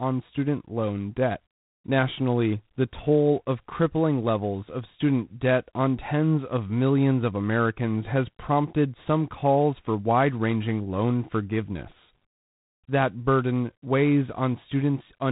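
From start to finish the speech carries G.726 ADPCM coding damage, and it is plainly audible. Each sample is sent as a coarse difference from an adaptive prediction, and the sparse quantising here leaves a harsh, rasping hiss that rises and falls with the speech level. That points to the 24 kbit/s mode. Nothing passes above 3.9 kHz. Unlike perceptual codecs, there is no warbling or swirling. The error is granular noise that tracks each syllable.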